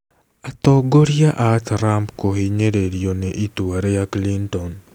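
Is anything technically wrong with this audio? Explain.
No, nothing technically wrong is audible in this speech recording.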